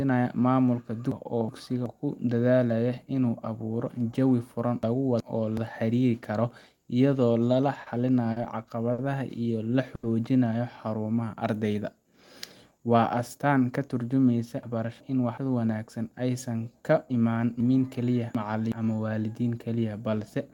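Chunks out of order in this speech recording appear at 1.12–1.86 s, 4.83–5.57 s, 14.63–15.37 s and 17.60–18.72 s. A 372 ms block plays one slot late (two slots late in the last case), so the speech jumps back and forth with a hard join at each break. A short stall from a late packet occurs at 7.83 s and 8.32 s, both just after "karo iyadoo la", then at 8.92 s and 9.95 s. Each time the jitter buffer ran dry and the receiver stretched the last sound for 30, 40, 60 and 80 ms, so a sound hangs with a faint buzz or dip. Jitter buffer speed-up runs from 12.71 to 13.53 s, ending before "ka tarjumeysa". To shed backlog, the receiver trimmed about 70 ms in pitch-period slices, so the speech runs 8% fast at unchanged pitch and sounds hurried.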